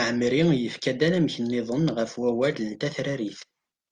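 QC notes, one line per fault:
Nothing stood out on listening to this speech recording.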